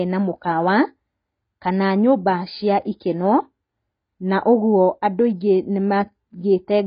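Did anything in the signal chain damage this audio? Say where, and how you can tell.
Yes. Throughout, the speech sounds dull and smeared, with nothing above 5 kHz and a warbling, fizzy edge on sibilants. The stage is the codec: likely heavy AAC compression, AAC-LC at a rate that fits about 16 kbps, lowering its cut-off and starving bands of bits.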